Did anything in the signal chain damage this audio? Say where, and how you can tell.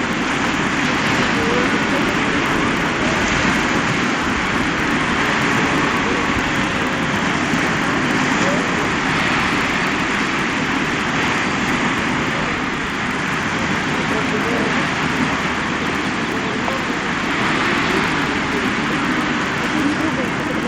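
Yes. Throughout the clip a faint, steady buzz at 100 Hz rides on the sound. It is a rapid string of tiny ticks that follows the signal level and vanishes in quiet gaps. This points to the sample-rate conversion stage, a resampler restarted on every block while converting 16 kHz to 48 kHz. Each 10 ms block was converted alone, so its edges were computed without the true neighbouring samples, leaving a small error at every boundary, 100 times a second.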